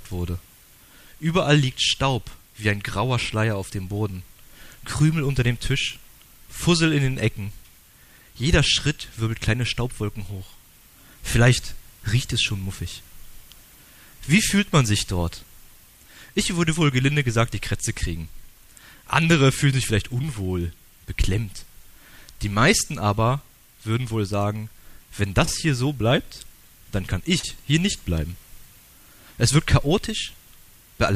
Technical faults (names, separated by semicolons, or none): short concealed packet loss